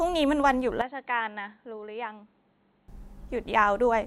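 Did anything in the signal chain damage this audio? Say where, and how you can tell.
Yes. From 0.81 s to 2.88 s the speech suddenly goes dull and boxy, with nothing above 4.2 kHz, drops roughly 10 dB in level, and picks up a faint new noise floor well under the voice. It cuts over cleanly with no gap and snaps back just as abruptly. That points to the driver or device stage: the input likely switched to a poorer device, probably a narrower-band mic or headset profile, and then back again.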